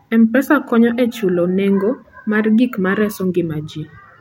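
No technical faults are audible anywhere in this speech recording.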